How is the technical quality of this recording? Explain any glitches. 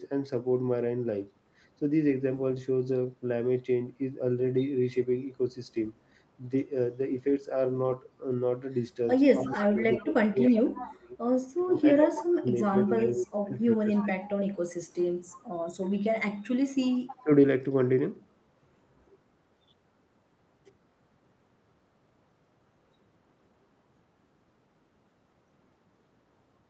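The recording has two call faults, both in the middle section, where the talker competes with sound coming back from the far end.

Speech suppressed in double talk: from 9.44 to 14.45 s, and briefly from 17.23 to 17.30 s, the voice dips by up to about 25 dB. This is likely an echo canceller turning down the talker while both sides speak.

Echo leak: a delayed, quieter copy trails the speech by 315 ms, at about 10 to 25 dB below it, at 9.47 to 10.91, 12.16 to 12.69, 13.67 to 14.31, 14.94 to 15.44 and 16.39 to 17.24 s. This is likely loudspeaker pickup that escaped cancellation.

Throughout, the sound stops at 8 kHz, which fits a wideband Opus call path.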